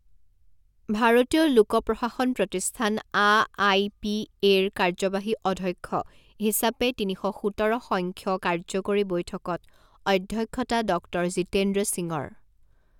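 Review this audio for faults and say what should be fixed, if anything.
Nothing needs to be fixed, as no faults can be heard in the audio.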